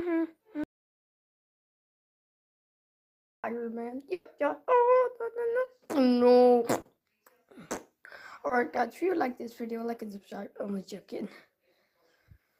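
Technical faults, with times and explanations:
0.64–3.44 s, audio dropout to silence: about 2.8 s of silence with no room tone, unlike concealment; likely a lost input while recording continued.
4.13–4.27 s, burst of packet loss: 120 ms missing, filled by the receiver extending the last sound and fading it, a held buzz or hiss rather than silence.
5.65–5.69 s, 6.81–6.87 s, 8.47–8.51 s, short concealed packet loss: 20 to 40 ms gaps patched by extrapolation, heard as a brief smear or wobble, far shorter than the burst.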